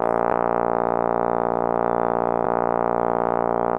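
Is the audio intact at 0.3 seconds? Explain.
No. At 0.30 s the music has damaged data in a compressed stream: corrupted bytes make the decoder lose frame sync and resynchronise, producing a short blip.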